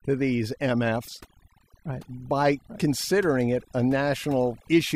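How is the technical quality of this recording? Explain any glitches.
Technical quality is compromised by overdone noise removal, present throughout the speech. An aggressive noise reducer has pulled down frequency bands sitting near its noise estimate, taking quiet parts of the voice with them. The background drops and breaks up into twinkling specks.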